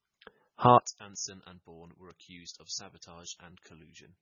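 From the very start, the speech has the smeared, watery, band-limited quality of a heavily squeezed MP3, even though the file is a generous size. That's the signature of low-bitrate audio saved at a high bitrate: most likely an MP3 at something like 16 kbit/s that was later re-encoded around 192 kbit/s. The second pass faithfully preserves the damage. The missing top end and the swirly artefacts from the first encode all stay put, and the extra bits buy nothing.

Then at 0.78 s, once you fold it down to mono, the voice suddenly drops by about 20 dB and stays that way to the end. That points to one channel inverted, likely a polarity flip on one side of the stereo pair. The centred voice is nearly identical in both channels, so summing them makes it largely cancel. What's left is only the small difference between the channels, which comes through as a faint ghost of the speech.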